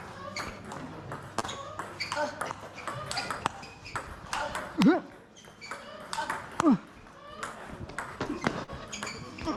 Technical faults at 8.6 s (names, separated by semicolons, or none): short concealed packet loss